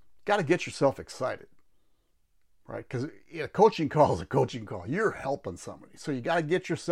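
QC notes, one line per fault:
No technical faults are audible anywhere in the speech recording.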